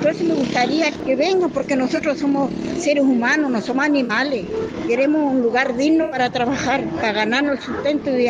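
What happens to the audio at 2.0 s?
Just before 2.0 s, from 1.95 to 2.00 s, a corrupt frame was concealed: damaged bits reached the AAC decoder, which detected them and covered the gap itself. The concealed span lasts about 46 ms, which fits two lost frames.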